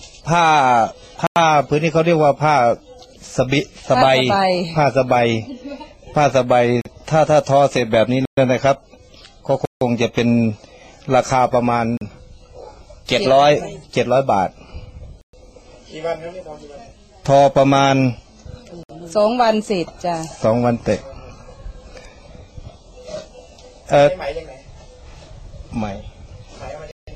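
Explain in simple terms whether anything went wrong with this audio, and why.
The program producing this audio likely fell behind repeatedly and failed to fill its output in time, so short stretches were replaced by zeros. These are blocks of digital silence. The sound drops out abruptly and snaps back with no fade. Holes occur at 1.27 s (93 ms), 6.81 s (40 ms), 8.25 s (120 ms), 9.65 s (160 ms), 11.97 s (40 ms), 15.21 s (120 ms), 18.83 s (60 ms) and 26.91 s (160 ms).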